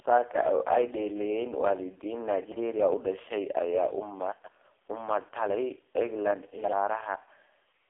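Throughout, the speech has the AMR narrowband mobile codec's sound: heavily buzzy and synthetic, with nothing above 3.5 kHz. The coarseness, beyond mere band-limiting, fits its lowest 4.75 kbps mode.

From 4.32 to 4.48 s, chunks play out of order: a 40 ms piece arrives three chunks late. Unlike a dropout, nothing goes missing; the audio jumbles briefly.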